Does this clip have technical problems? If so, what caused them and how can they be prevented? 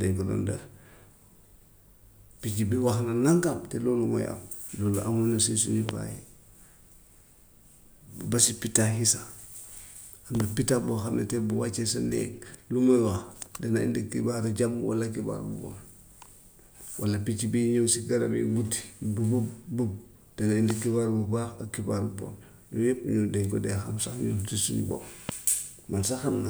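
Yes. A loud pop occurs three times: 5.89–5.91 s, 20.70–20.73 s and 25.29–25.31 s, peaking about 20 dB above the speech at first, then about 15 dB. Each single sharp pulse sits on the continuing speech, likely from a voltage spike such as a switch, static discharge or driver glitch. Prevention: secure connections, avoid switching gear during recording, and use grounded, static-safe equipment.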